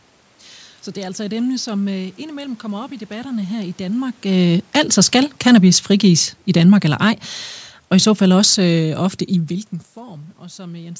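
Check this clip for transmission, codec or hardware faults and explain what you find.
Automatic gain falling occurs twice in this speech. From 4.25 to 7.19 s the level sinks by about 5 dB, then from 7.8 to 9.6 s by about 3 dB more. The gain control judged the input too loud, or its background noise too strong, and eased its gain down, so speech and room noise fade together. On a waveform, the envelope tapers steadily while the noise floor drops in step. On a spectrogram, every band dims evenly, up to the 8 kHz ceiling of the call microphone path. The talker's own shifts near 4 s and 9 s alter only the voice, not the background.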